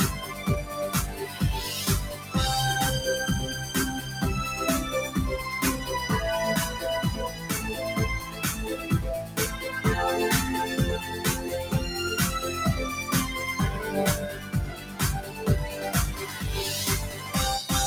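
A noise suppressor tuned for speech is active across the whole clip, treating sustained material as noise; level swings around 10 dB, so the sound pumps and thins. Sound cut by the noise suppressor is heard at 0.13–1.41, 2.14, 7.29, 8.23, 9.23, 14.32–15.42, 16.23 and 17.10 s, with sustained parts dropping about 5 to 9 dB while sharper onsets pass.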